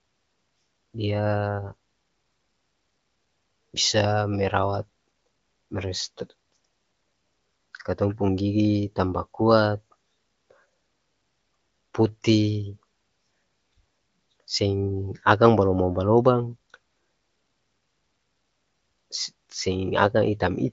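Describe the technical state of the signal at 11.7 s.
At 11.7 s the speech is intact, carried cleanly through the AMR wideband (HD Voice) codec at 23.05 kbit/s with nothing above about 7.5 kHz, and no fault occurs there.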